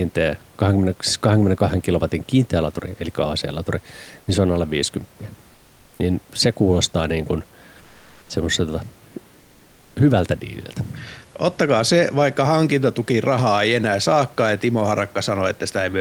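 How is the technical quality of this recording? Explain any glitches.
The speech has two short glitches where the room noise, about 33 dB below the speech, briefly turns flat. From 5.53 to 5.99 s, and again from 7.81 to 8.29 s just after "se kuulostaa niin kuin", the background becomes a steady, featureless hiss. That hiss is about 4 dB quieter in the first gap and about 1 dB louder in the second. This is comfort noise in place of the background, likely from discontinuous transmission: the sender paused during silence and the receiver synthesised filler noise.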